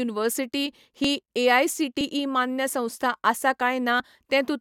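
At 1.04, 2.01 and 4.00 s, overlap between stream segments trims a few milliseconds at one-second boundaries; each cut shows as a waveform step and thin vertical spectrogram line, heard as a tiny skip.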